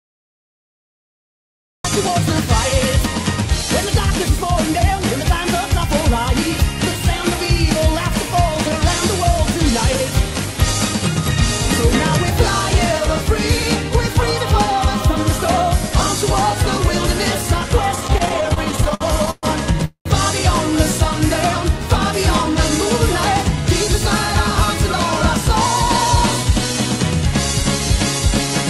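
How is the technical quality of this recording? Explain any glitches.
The recording has three clear glitches: a clipped opening and two network-related disruptions close together in the second half.

From 0 to 1.85 s there is a cut-off start. The file holds digital silence, and at 1.85 s the audio begins partway through a sound, with no attack or fade-in. The capture or stream evidently began after the sound was already under way. On a waveform this is a flat line that jumps abruptly into the signal. A spectrogram shows a blank region ending in a hard vertical edge, and that sudden onset can produce a small click.

Between 17.95 and 19.45 s the audio suffers repeated stalls (stutter): 22 brief stalls, the longest about 124 ms, adding roughly 415 ms of filler, about 28% of that stretch. Data kept arriving too late to keep up with playback, so the receiver's buffer ran dry over and over. 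Each time, it extended the last sound until fresh data arrived. Nothing is lost, but the passage drags and judders. A spectrogram shows repeated smeared, horizontally stretched patches, with the longer ones fading. The waveform shows short sustained or decaying plateaus interrupting the normal envelope.

From 19.85 to 20.07 s there is a call audio freeze lasting about 206 ms. The sound holds as a fading buzz and then drops into about 100 ms of silence before picking up exactly where it left off, so the gap is inserted and nothing is cut. The likely cause is delayed packets emptying the jitter buffer, with the receiver concealing the wait. On a spectrogram it appears as a frozen, decaying band followed by a blank column. The waveform shows a tapering hold and then a flat line.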